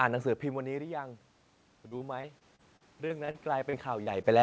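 Automatic gain rising runs from 0.41 to 1.19 s. The level at the microphone fell by about 14 dB as the talker moved away, and the gain control responded by gradually adding about 4 dB. Voice and room noise swell together, only partly restoring the loudness.

Repeated packet loss, with its robotic sound, spans 1.88 to 4.27 s. About a dozen short holes, none longer than 38 ms, are each patched by stretching the preceding sound, concealing roughly 15% of the stretch. The speech turns choppy and robotic, with fragments missing.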